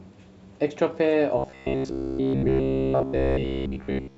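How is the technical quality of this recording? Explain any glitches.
The recording has one serious fault: from 1.38 s to 4.17 s the speech turns into robotic sound from repeated short buffers. Essentially all of that stretch is built from the same short fragment played over and over, likely because fresh audio was arriving too slowly and the gap was filled by looping the last block. The repeats impose a fixed buzz at 66.8 Hz, implying a loop of roughly 15 ms, so the voice becomes a rigid metallic drone that only loosely tracks the speech.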